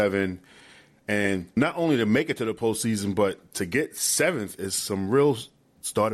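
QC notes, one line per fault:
No faults heard anywhere in this speech recording.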